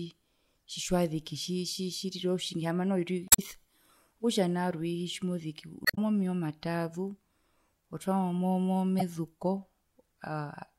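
After "otjingi haamba noho" (3.26–3.39 s), before "meya omataazu" (5.83–5.98 s) and after "otwamo mo mo" (8.99–9.02 s), damaged data in a compressed stream makes the decoder misread frames and lose sync. The result is a brief glitch at each point.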